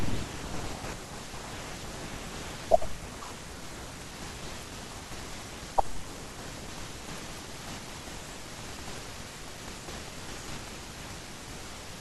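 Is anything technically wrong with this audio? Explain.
Yes, there's a train of clicks from 4.48 to 9.26 s: around thirty near-identical ticks at a steady 5 per second, peaking about 5 dB above the speech and audible through the pauses too. That regular pulse is likely interference from nearby equipment or a faulty connection or power supply.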